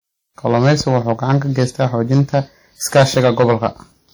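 Speech runs the whole clip with hard clipping throughout. It is driven about 13 dB past full scale, so a small share of peaks are cut flat and crackle harshly. Codec artefacts from the first encoding also persist, though the band extends to about 20.1 kHz. This is likely low-bitrate audio saved at a high bitrate, and the damage fits a 48 kbit/s WMA source re-encoded as 192 kbit/s MP3.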